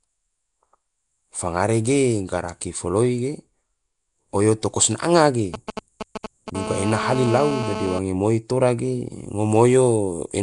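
Throughout the speech, the audio has likely passed through Nellymoser compression: the Flash-era codec spends a fixed, small bit budget per block and fills starved bands with noise, consistent with around 44 kbps. The result is plainly audible: a rough, hissy halo, a smeared underwater character, and nothing above 10.6 kHz.

From 5.54 to 6.50 s, a nearby 2G phone exchanging signalling with its network produces GSM signalling bursts. The recording circuit rectifies these intermittent radio pulses into a galloping dit-dit-dit of short 217 Hz buzzes, only a little quieter than the speech.

From 6.55 to 7.99 s, the same interference changes to GSM phone buzz, as the phone moves into a call and transmits continuously at 217 bursts a second. The rectified pulses become a steady, hard, raspy 217 Hz buzz rich in harmonics, about 7 dB below the speech and unrelated to it.

From 9.12 s to the end, pre-emphasis was left on: a treble boost fitting the CD 50/15 µs curve was applied without the matching de-emphasis. 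With highs about 8 dB too strong at 10 kHz relative to 1 kHz, the speech turns thin, bright and sibilant.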